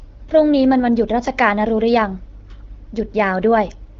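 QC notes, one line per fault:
Nothing stood out on listening to this speech recording.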